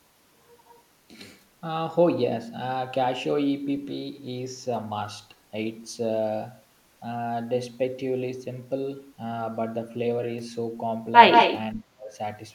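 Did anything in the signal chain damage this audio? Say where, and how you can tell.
Yes, in call processing. At 11.3 to 11.58 s a copy of the speech trails 161 ms behind, about 5 dB quieter than the original. This is likely an echo leak from an incomplete echo canceller.

Also in call processing: at 11.74 to 12.17 s the speech dips, around 35 dB down at worst. This is likely speech suppressed in double talk, with the canceller turning down its own talker along with the loudspeaker echo.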